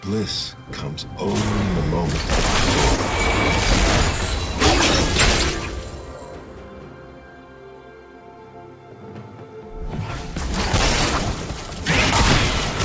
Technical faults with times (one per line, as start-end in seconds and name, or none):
2.96-3.00 short concealed packet loss